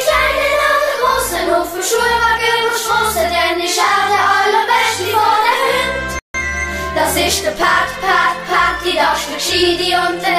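At 6.19 s the sound cuts to silence for 154 ms and resumes at 6.35 s, likely a Bluetooth stall where delayed packets left the playback buffer empty.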